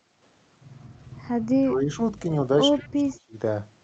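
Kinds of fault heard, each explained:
Speech suppressed in double talk: The speech drops sharply from 1.61 to 1.9 s, by about 20 dB, then recovers. It drops again, more deeply, from 2.73 to 3.35 s, by about 25 dB. This is likely the echo canceller turning the talker down while the other side was also speaking, because it took both sounds for echo. A network dropout breaks the audio into gaps or repeats, but here the level ducks.
Echo leak: A faint, delayed copy of the speech trails the original by 125 ms at about 25 dB below it. It surfaces briefly from 2.8 to 2.87 s, inside the second suppressed stretch. It is likely what remained after an echo canceller failed to fully remove a loudspeaker's sound picked up by its microphone, so it was sent back. Room reverberation decays smoothly, but this is a distinct, late, separate copy.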